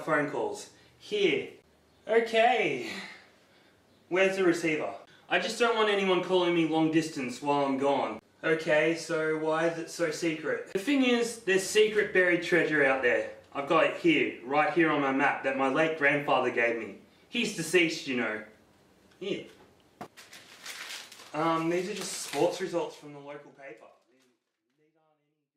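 No technical faults are audible in the signal, and the gentle fade-out that begins around 22.5 s eases the level down smoothly with no click or hard edge.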